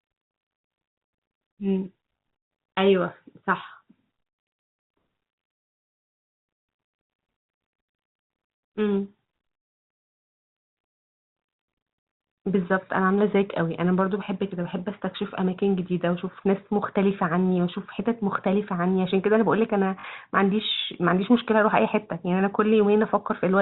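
At 20.0 s the speech stutters briefly: packet loss with the last packet repeated. About 40 ms went missing, which fits two 20 ms packets, and the receiver replayed the previous one to fill the gap. The repeats buzz around 50 Hz. The G.711 telephone coding keeps everything under 4 kHz.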